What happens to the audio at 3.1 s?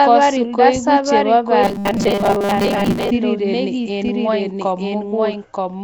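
At 3.1 s the robotic sound from repeated short buffers ends. From 1.63 s to 3.11 s, new audio likely reached the playback side too seldom, so the software kept replaying the last few milliseconds while most of the real sound was skipped. The replays repeat at a steady 200 Hz, which fits a loop of about 5 ms. This forces a rigid, metallic buzz onto the speech that only roughly tracks its shape. At 3.11 s the buzz stops.

Through this moment and the rest of the clip, a doubled audio track is also audible. A second copy of the same speech, likely from a slower capture path or a misaligned edit, trails about a second behind at roughly the same level. It is full-band and dry, with no decay or room colour. So the speech at 3.1 s overlaps material from about a second earlier.

Nellymoser compression shapes the whole sound as well. The Flash-era codec likely coded the audio in small fixed blocks with very few bits, at a rate that fits about 32 kbps. 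Bands it could not afford were filled with noise. The result is a plainly audible rough, hissy halo and a smeared, underwater quality around the speech.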